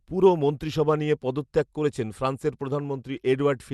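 No faults are audible in this speech; it carries the ordinary coding texture and roughly 12 kHz upper band limit of a correctly working call codec.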